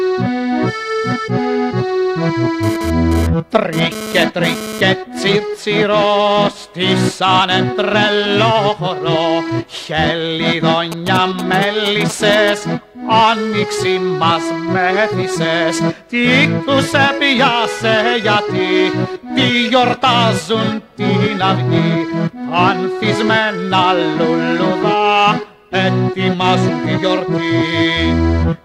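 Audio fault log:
2.63–4.81 s, GSM phone buzz: a hard, raspy buzz at 217 Hz (216.7 Hz burst rate) rides over the sound at about -10 dB relative to the signal, unrelated to it. A nearby 2G phone transferring data sends its radio pulses, and the audio circuit rectifies them into this audible buzz. On a spectrogram it shows as a stack of evenly spaced horizontal lines at 217 Hz and its many harmonics. The waveform carries a dense comb of sharp pulses.
10.92–12.50 s, GSM signalling bursts: a galloping dit-dit-dit of short 217 Hz buzzes, roughly 10 dB below the signal. Here a nearby 2G phone sends only short groups of radio bursts at the 216.7 Hz rate, and the audio circuit rectifies each group. A spectrogram shows broken vertical clusters of harmonic lines in a rhythmic pattern, not continuous bands. The waveform shows separate packets of spiky pulses with gaps between them.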